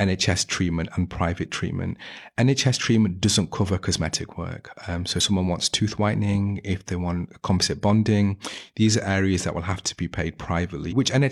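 Damaged data in a compressed stream appears at 5.16–5.21 s, just before "someone wants tooth whitening", and again at 10.87–10.93 s. Corrupted bytes make the decoder misread frames and lose sync until it finds a valid header, leaving a brief glitch in the speech each time.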